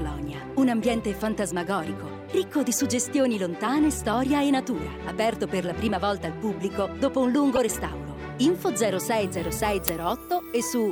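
At 7.53 s, a corrupt frame was decoded. Damaged bits reached the decoder, and it played the frames anyway. Gains and codes were misread, so energy landed at the wrong frequencies. The damage spans about three frames and ends at 7.58 s. It is heard as a brief chirp, squeak, blip or burst of noise, unrelated to the surrounding audio. Its peak is loud, at about -10 dBFS.

At 9.88 s comes an uninitialised buffer. A 10 ms block was played before any audio was written into it. Stale memory was therefore output as samples. The result is a sharp, loud crack. It is short.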